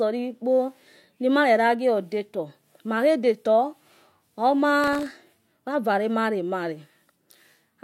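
Speech clip with one patch of processor overload crackle, from about 4.84 to 5.11 s. The processor couldn't finish its audio buffers in time and missed a whole run of them. Each miss drops a tiny slice of silence with hard edges. That sounds like gritty tearing over the voice, and the buffers look very short, somewhere under a millisecond each. Once the load eased the crackle stopped.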